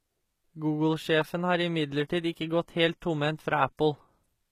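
A short speech clip carries plainly audible codec damage from start to finish. The treble sounds synthetic, and nothing is present above 14.9 kHz. The likely cause is HE-AAC compression, the v2 variant, at a low rate that fits about 20 kbps. Only the lower spectrum is truly coded. The top band is rebuilt by copying lower bands upward under a coarse envelope. Its harmonics therefore fail to line up with the real ones below the crossover.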